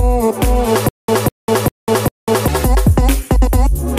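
Stutter with silent gaps from 0.89 to 2.48 s: a 200 ms fragment repeats four times, each followed by about 198 ms of dead digital silence, a steady 398 ms cycle. This likely comes from a stalled stream replaying its last buffer, and the audio meant for that stretch is lost.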